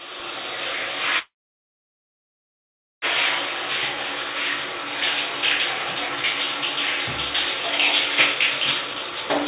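From 1.19 to 3.05 s a call audio freeze stops the sound: a brief fading buzz or hiss, then about 1.7 s of silence. It is likely a jitter buffer running empty, and unlike a dropout nothing is lost afterwards. From 8.87 s to the end, a jitter buffer speed-up runs the sounds at 136% speed with unchanged pitch, trimming about a fifth of a second. The G.711 A-law path keeps everything below 4 kHz.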